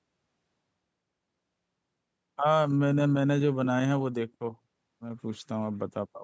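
Speech, and nothing is technically wrong with it.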